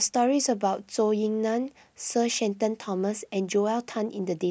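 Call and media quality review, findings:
No audible faults in the speech signal; level, continuity and timing remain stable throughout, with nothing pointing to a failing component in the capture, transport or playback chain.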